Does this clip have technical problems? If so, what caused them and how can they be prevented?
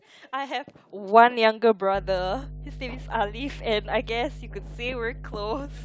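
Yes. Mains hum enters at 1.95 s and continues to the end: a steady 50 Hz tone around 15 dB below the speech, coupled in from the power line by a ground loop or nearby transformer. A spectrogram shows a constant horizontal line at 50 Hz, and the waveform shows a regular low-frequency ripple filling the pauses between phrases. Prevent it with balanced cabling, a single common ground point, and distance from power transformers.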